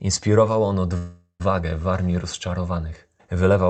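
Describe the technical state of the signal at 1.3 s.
At 1.3 s the signal is inside a call audio freeze running from 0.97 to 1.42 s. The receiver likely ran out of buffered packets, so it stretched the last sound into a fading buzz that ends in a short stretch of near-silence, about 0.42 s of fill in all. Unlike packet loss, nothing is skipped. The sound resumes exactly where it stopped, and everything after arrives about 0.42 s later than it otherwise would.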